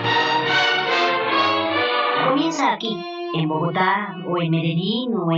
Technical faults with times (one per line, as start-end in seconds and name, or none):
0.00-5.37 channel delay (doubling)